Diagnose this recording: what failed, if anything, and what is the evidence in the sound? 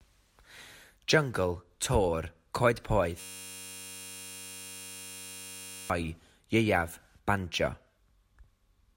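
At 3.2 s the speech gives way to a hard, steady buzz pitched near 94 Hz that runs until 5.9 s. It is a single 10.67 ms fragment repeating exactly, hundreds of times over. This is a system hang loop at the driver or buffer stage. The computer stalled while the audio hardware kept replaying the same ring buffer, and the loop length fits a 512-sample buffer. About three seconds of real audio never arrived.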